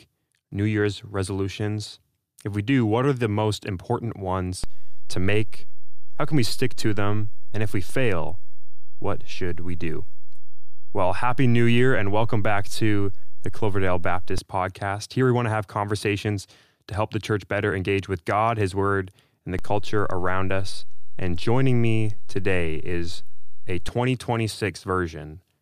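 DC steps at 4.64 s and 19.59 s shift the waveform's zero line by about -17 dBFS and about -19 dBFS, holding until 14.38 s and 23.89 s. Each jump and return lands as a low thump beneath the unchanged sound, as when an offset input is switched in and out.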